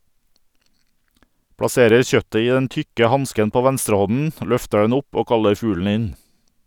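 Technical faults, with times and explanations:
1.63 to 2.02 s, CD scratch ticks: four short clicks, each well under a millisecond, arrive about eight times a second just before "kjøttet i den tykke". A scratch on the disc passes the laser once per revolution and wipes out more data than error correction can restore. The player then interpolates or briefly mutes the damaged samples, and each patch is heard as a tiny tick repeating at the disc's rotation rate.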